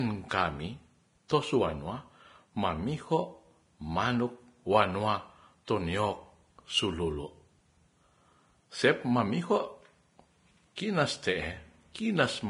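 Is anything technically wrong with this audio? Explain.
Yes. The whole clip has heavy Vorbis compression damage. Nothing comes through above 10.5 kHz, and the remaining treble sounds hissy and grainy because fine detail has been quantised into noise. That's likely a low-bitrate Vorbis encode, around 28 kbps from the sound of it.

There's also pre-echo at 1.28 s and again from 10.76 to 10.78 s. The codec spreads its quantisation noise across the whole block, so a brief hiss of about 15 ms and then 20 ms leaks in ahead of each sharp attack, softening it.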